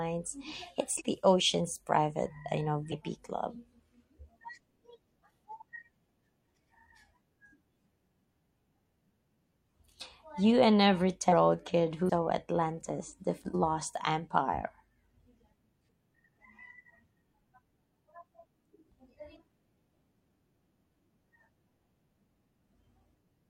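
Compressed frames were skipped at 0.96, 2.88, 11.29, 12.05, 13.50 and 22.51 s. Each time, the speech jumps ahead by a fraction of a second, up to almost half a second. The jumps fit a frame length near 43 ms.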